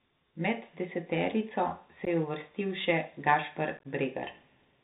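Throughout, the speech sounds muffled and narrow, with scratchy s sounds and a granular hiss underneath. This is the Bluetooth CVSD headset codec, whose one-bit delta coding fits a 64 kbps link and cuts everything above 4 kHz.

At 2.05 to 2.08 s there is a brief hole with abrupt edges and a moment of lower level. This is unconcealed Bluetooth headset packet loss, with about 15 ms, likely a couple of packets, dropped and replaced by silence or an idle pattern. From 3.77 to 3.87 s the speech turns chopped and crackly as further losses totalling 45 ms scatter across about 75 ms, none longer than 15 ms.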